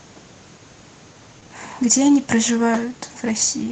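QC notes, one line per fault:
Throughout: clock drift between sender and receiver. The sender runs about 5% slow, so the jitter buffer keeps draining and needs topping up.
1.13–3.65 s: repeated timing corrections. Short bits get repeated to cover the shortfall, slowing things to 97% and adding about a tenth of a second. Each is small, and they are unevenly spaced.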